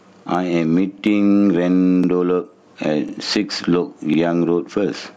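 Gain pumping runs through the whole recording. The input gain is likely set far too high, so a fast limiter clamps down on every loud syllable. The gain swings by about 15 dB, leaving the sound squashed.

Overlapping chunks then appear at 0.99–1.04, 2.04–2.09, 3.09–3.14 and 4.14–4.19 s. The audio was handled in 1-second blocks, each starting 50 ms before the previous one ended, so that sliver plays twice, giving a regular once-a-second stutter.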